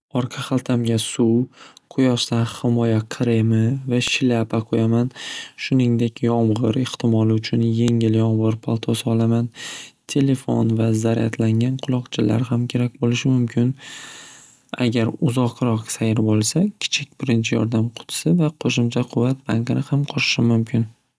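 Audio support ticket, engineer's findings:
File header played as audio: WAV segments concatenated/streamed with headers intact; header bytes decoded as sample values. Result: sharp, loud click at each segment boundary, 4.08 s and 7.88 s, independent of speech level. Component: segment joiner or stream packager. Fix: strip headers before appending data chunks, or parse each header and skip to data offset.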